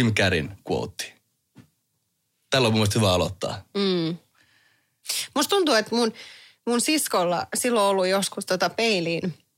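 No technical faults can be heard anywhere in this speech recording.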